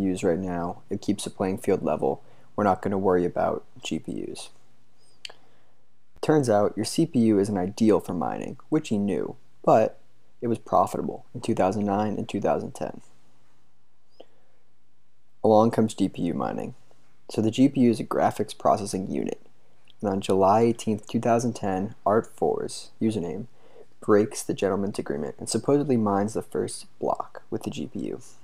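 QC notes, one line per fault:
6.17 s, block of digital silence: an 11.6 ms hole where the sound drops to zero and returns with no fade, which fits a missed 512-sample buffer. The abrupt edges give a sharp tick, unlike a fade-out dropout or a single-sample click.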